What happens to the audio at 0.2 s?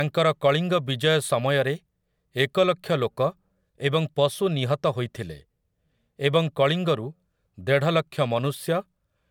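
Nothing goes wrong at 0.2 s; the speech is intact there, with no dropout, click or distortion at that point.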